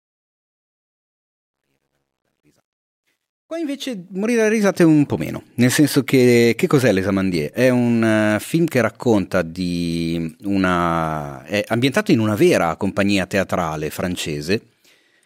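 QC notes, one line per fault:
0.0–4.81 s, truncation distortion on a fade: the fade-in starts gritty, worst from 0.0 to 2.47 s, before the smooth rise clears. At low gain, too few bits without dither square the waveform into steps, which fits an 11-bit stage.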